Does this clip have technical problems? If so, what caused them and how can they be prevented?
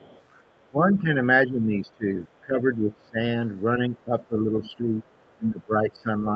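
Yes. Other side's voice leaking through, from 0.0 to 0.21 s: a faint second voice sits about 30 dB below the main speech at the very start. This is likely residual echo: the loudspeaker's playback reached the microphone, and the echo canceller had not fully removed it, perhaps because it was still converging in the first fraction of a second. A headset, or lower loudspeaker volume with a well-converged echo canceller, would prevent it.

Speech suppressed in double talk, at 0.69–1.17 s, 1.46–2.08 s, 2.41–3.19 s, 3.79–5.07 s and 5.37 s to the end: the talker's level repeatedly sinks, by around 15 dB in most stretches and around 10 dB in the 3.79–5.07 s one. The likely cause is the echo suppressor mistaking overlapping talk for echo and attenuating everything, including the near-end voice; separately, the call path limits the bandwidth to 8 kHz. A headset, or an echo canceller with better double-talk detection and gentler residual suppression, would prevent it.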